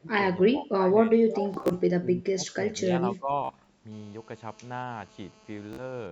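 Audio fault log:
0.00–0.18, 0.37–0.89, 1.11–1.42, 1.99–2.69, 2.85–2.91 and 3.18–3.31 s: speech suppressed in double talk. The echo canceller likely mistook overlapping talk for echo and ducked the speech by about 5 to 25 dB, so it dips and thins.
1.54–1.72, 3.45–3.66 and 5.73–5.81 s: Bluetooth stutter. Lost packets made the receiver replay short slices, with runs up to about 46 ms, heard as a buzzy stutter before the speech jumps ahead.
3.92–6.07 s: GSM phone buzz. A nearby 2G phone in a call pulses at 217 Hz into the circuitry, adding a harsh, harmonic-rich rasp about 23 dB below the speech.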